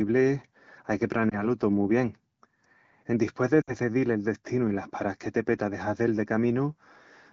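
At 1.30 to 1.46 s, then 3.61 to 3.73 s, lost AMR speech frames: the decoder stretches the last good pitch with fading gain, so speech dips or warbles. The first is brief, one 20 ms frame; the second, about 60 ms, fades to near silence within two frames.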